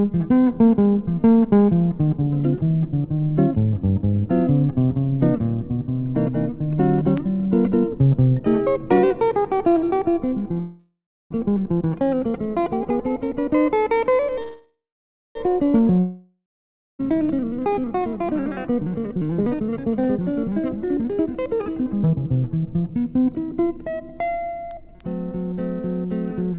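At 10.6 to 11.33 s and again at 14.42 to 15.38 s there is a call audio freeze. The last sound stretches into a fading buzz, then about 0.35 s and 0.58 s of silence. This is likely packets stalling until the jitter buffer ran dry. Playback resumes where it stopped, so nothing is lost, but each freeze adds about 0.7 s and 0.93 s of delay. On a spectrogram, smeared horizontal streaks fade into a blank column.

From 15.99 to 17.02 s a long network dropout follows. There is again a decaying buzz, then about 0.59 s of silence. When sound returns, about 1 s of audio is simply gone, likely because packets never arrived. The waveform shows a flattening envelope, a flat line, then an abrupt restart mid-stream.

From 17.52 to 25.53 s the jitter buffer speed-up drains the built-up delay. Short pitch-period chunks are cut repeatedly, roughly 1.5 s in total, so the audio plays at 116% speed while keeping its pitch and sounds hurried. 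The spectrogram shows compressed time structure with harmonics unchanged. Throughout, nothing appears above 4 kHz, which fits a 64 kbps G.711 mu-law call path.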